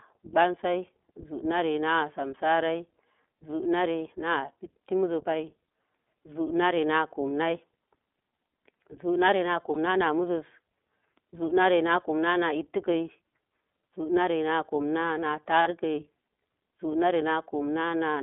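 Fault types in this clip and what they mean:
iLBC codec: The speech runs through a narrowband VoIP codec for the whole clip. At this rate, which fits a 15.2 kbps mode with 20 ms frames, the sound is clear but plainly rough and slightly synthetic. The line band runs from about 250 Hz to 3.6 kHz, so a spectrogram shows empty space above roughly 3.6 kHz and thinned lows, with coarse, smeared harmonic detail inside the band.
lost iLBC frames: Two short dropouts where the decoder had no data and filled in by repeating the last pitch cycle with added noise. The first, at 9.74 to 9.77 s, lasts 20 ms. The second, at 15.62 to 15.68 s, lasts 40 ms. Each is heard as a brief held, faintly buzzy vowel. On a spectrogram it shows as flat, repeated harmonic bands, and the waveform shows repeating cycles before normal speech resumes almost at once.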